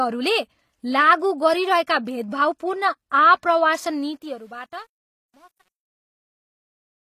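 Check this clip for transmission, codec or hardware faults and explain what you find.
There are three problems here: codec damage through the whole clip, a gritty fade over the second half, and one pre-echo inside that fade.

The codec damage is plainly audible all the way through, and nothing sits above 14.9 kHz. The top end sounds rebuilt rather than real, with s sounds coming out gritty or lispy. That's likely HE-AAC compression at a low rate, around 24 kbps. It codes the lower band and fakes the treble by copying lower bands upward, so the harmonics don't line up across the join.

From 3.91 s to the end there's truncation distortion on the fade. It's worst from 4.53 s onward. The fade stage seems to keep too few bits and add no dither, which fits roughly 9-bit resolution. As the level drops toward the smallest step, the waveform turns into coarse steps and the tail sounds grainy.

Pre-echo appears from 4.17 to 4.22 s. 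A 45 ms smear of hiss comes before an attack, and the attack itself loses its edge. The transform codec spreads its noise over the whole block, so noise sized for the loud onset also fills the quiet moment just before it.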